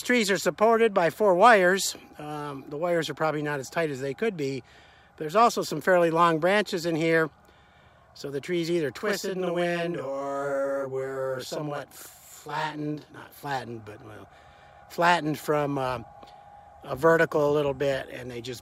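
From 9.01 to 13.45 s there is a channel delay, heard as doubling. One channel arrives 40 ms late, and the two are summed to mono. The late copy sits beside the original at equal level, so the sound is doubled, like a tight slap echo.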